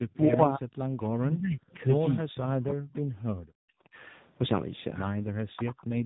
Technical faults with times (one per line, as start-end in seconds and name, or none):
0.00-6.06 tandem speech coding
3.33-3.38 background gated by the echo canceller